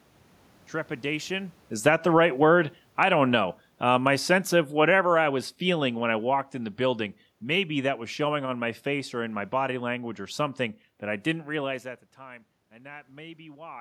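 From 1.71 s to 9.86 s there's automatic gain falling. The AGC found the input too loud or its background noise too strong, and eased its gain down by about 15 dB, so the speech and the room noise behind it sink together, settling just before "or something that I".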